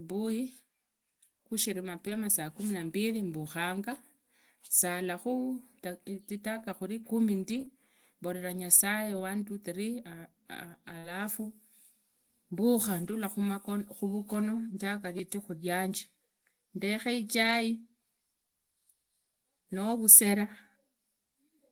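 At 2.05 to 2.15 s there is a lost packet rebuilt from error correction. About 60 ms plays from a low-bitrate backup copy, sounding rougher and noisier, with no gap.

From 7.49 to 13.13 s come scattered short gaps. Roughly three brief holes, the longest around 40 ms, are patched by extending earlier sound, leaving small ticks or smears.

At 15.18 s a repeated buffer occurs. New audio arrived late, so a tiny piece, which fits a 5 ms buffer, replays several times as a click or brief buzz.

At 17.43 to 17.53 s another packet loss is rebuilt from error correction, again about 60 ms of rougher, noisier sound without a gap.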